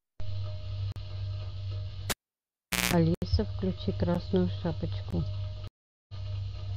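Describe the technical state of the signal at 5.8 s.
At 5.8 s the signal is inside a stream reconnect from 5.68 to 6.13 s: the connection dropped, about 0.41 s of silence follows, and a fresh decoder resumes the speech roughly 0.3 s further on.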